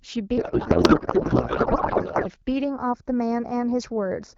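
From 0.37 s to 2.28 s the speech is hit by a codec payload misread. The decoder unpacks AMR frames with the bit fields shifted out of place, which fits octet-aligned frames being parsed as bandwidth-efficient. The frames still decode as valid, so instead of silence there is garbled noise and warbling that barely tracks the speech. It stays that way for the whole stretch because the packing mismatch persists.

From 2.64 s to the end there is channel delay with comb filtering. One channel arrives a fraction of a millisecond late, around 0.15 ms, and is summed with the other. Content common to both cancels at evenly spaced frequencies, with the first notch near 3 kHz and the next ones further up. The result is a hollow, phasey speech tone, and the notches stay fixed in frequency.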